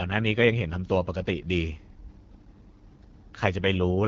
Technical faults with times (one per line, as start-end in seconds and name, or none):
0.00-4.07 AMR wideband (HD Voice) codec